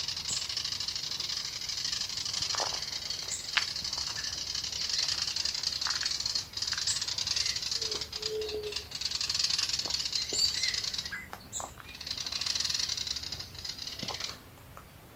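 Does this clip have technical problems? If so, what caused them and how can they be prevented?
No, there are no technical problems to point to in this clip. Nothing in it calls for a fix or a preventive step.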